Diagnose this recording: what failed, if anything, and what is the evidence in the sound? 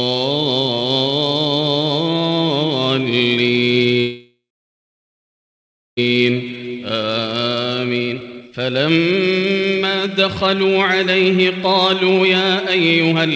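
A call audio freeze occurs from 4.00 to 5.99 s. The sound continues briefly as a fading buzz or hiss, then goes silent for about 1.6 s. Playback resumes where it stopped, so nothing is lost. The likely cause is delayed network packets leaving the jitter buffer empty.

A jitter buffer speed-up runs from 6.11 to 13.19 s. The sound plays about 22% fast but keeps its pitch. The buffer is trimming short pitch-period slices in rapid succession, cutting roughly a second and a half to recover the delay the stall added.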